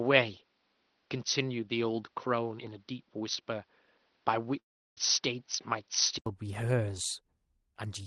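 From 0.0 s to 6.26 s the speech is dull and boxy, likely an input switched to a poorer device; the spectrogram is empty above 6 kHz until an 80 ms gap restores full bandwidth.

At 4.59 s a fading buzz, then flat silence on the waveform until 4.99 s, points to a likely long network dropout, with about 0.4 s lost.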